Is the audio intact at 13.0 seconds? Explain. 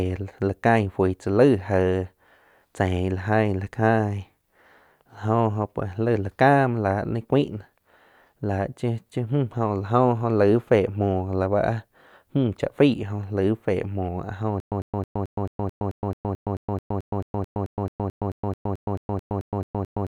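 Yes, the audio is intact at 13.0 seconds, with no dropout, distortion or other fault audible at that point.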